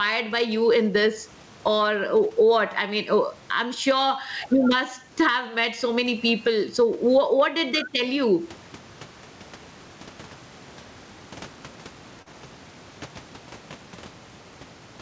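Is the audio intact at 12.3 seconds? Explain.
No. Between 12.22 and 12.33 s there is a short concealed packet loss. About 30 ms of audio never arrived in time, and the receiver filled roughly 39 ms by extending the preceding sound, dropping about 10 ms as it blended back. It is heard as a brief smear or wobble. In the waveform, the filled stretch runs into a crossfade.

Gain pumping also runs through this moment, likely from a fast limiter acting on excessive input gain. The level swings by around 15 dB, and the waveform envelope looks flattened and squashed.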